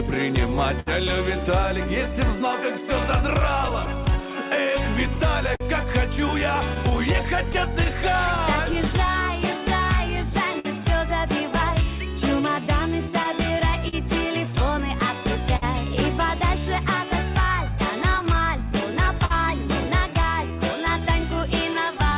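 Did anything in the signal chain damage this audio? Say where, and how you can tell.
Yes. At the network and jitter-buffer stage, the sender's clock runs slow, roughly 5% behind the receiver's. That is clock drift between sender and receiver. The buffer keeps draining, so small timing hiccups recur at uneven intervals across the whole clip rather than clustering around one event.

The receiver answers that drain with repeated timing corrections from 2.07 s to 22.16 s, playing at about 98% speed and adding roughly half a second overall. All of the edits stretch rather than cut, and they are unevenly spaced. That unsteady tempo distinguishes them from loss.

A short stall from a late packet comes at 0.80–0.88 s. The last sound is held for 64 ms, and then the audio resumes exactly where it left off, with nothing missing. A stall holds one sound, which sets it apart from drift's spread-out edits.

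Scattered short gaps appear in three stretches. There are about twenty between 3.19 s and 10.67 s, about three between 13.23 s and 15.64 s, and about five between 18.03 s and 19.32 s, none longer than about 50 ms. Each is bridged by continuing the prior sound, heard as brief ticks or smears through the band-limited G.711 sound, which stops at 4 kHz.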